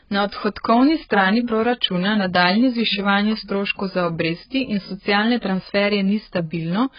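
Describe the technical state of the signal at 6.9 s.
AAC compression damage is present at 6.9 s, as it is throughout the clip. The speech has nothing above 5 kHz, a cut-off that points to a very low bitrate, around 12 kbps. That is likely an AAC-LC encoder starving its frequency lines of bits. It drops the top band and leaves gaps or noise-filled patches below it. The result at this moment is dull, heavily smeared audio with a warbling, fizzy edge on sustained sounds and sibilants.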